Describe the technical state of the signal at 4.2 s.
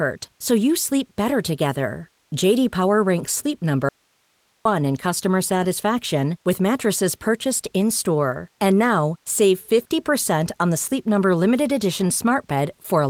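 At 4.2 s the speech has vanished, leaving only faint hiss roughly 45 dB down: an audio dropout to a faint residue from 3.89 to 4.65 s, likely a break upstream while the following path stayed live.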